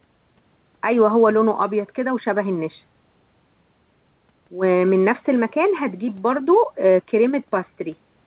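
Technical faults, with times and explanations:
The speech comes through a WebRTC call path with no content above 4 kHz, a narrowband telephone-style response that fits G.711 mu-law at 64 kbps, and no faults are present.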